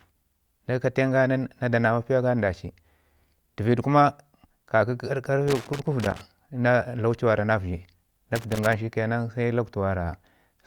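Loose connector crackle breaks into the speech twice, first from 5.48 to 6.21 s and again from 8.35 to 8.73 s. A worn or dirty contact somewhere in the signal path is intermittently losing touch, so the audio is chopped on and off many times in quick succession. The result is an uneven burst of scratchy crackle laid over the voice, lasting about 0.7 s the first time and under 0.4 s the second.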